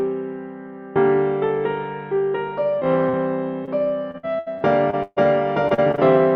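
Short concealed packet loss hits three times: 2.79 to 2.83 s, 3.09 to 3.15 s and 3.65 to 3.69 s. Each time 20 to 40 ms of audio never arrived, and the receiver stretched the last sound over the hole, so you get a quick smear or wobble.

Then it turns into repeated packet loss with a robotic sound. From 4.11 to 5.18 s there are six dropouts, the longest 136 ms, so about a third of that stretch is patched. From 5.68 to 5.99 s four more land close together, none longer than 36 ms. The patches pile up, and the audio comes out choppy, with bits missing.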